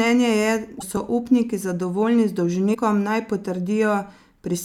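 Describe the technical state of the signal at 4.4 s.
At 4.4 s the signal is intact, with no audible fault at that point in the speech.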